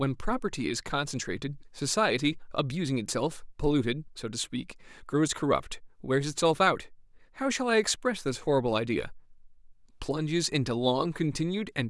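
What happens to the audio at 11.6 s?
Nothing goes wrong at 11.6 s: the speech carries on intact at that point, with no dropout, click or distortion to be heard.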